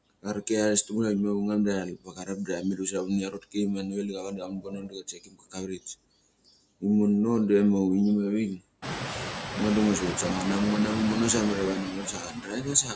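Speech carrying noise suppressor artifacts throughout: the steady background is pulled down by about 22 dB between phrases, leaving a residue that shows as blotchy, flickering patches in the spectrogram's quiet gaps. Speech cut by the noise suppressor occurs at 0.1–0.5 s, 1.85–3.57 s, 3.82–5.87 s and from 11.84 s to the end, where softer speech is swallowed along with the noise, dropping by about 21 dB (about 14 dB in the final stretch). On a waveform these show as abrupt dips in the envelope, and on a spectrogram as faded or missing consonant energy. The room noise rises noticeably around 9 s but stays about 8 dB below the speech, and the spectrogram is empty above 8 kHz.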